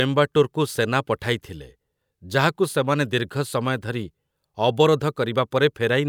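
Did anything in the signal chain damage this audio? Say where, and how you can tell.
No, nothing in this speech recording stood out on listening as damage from any stage of the signal chain.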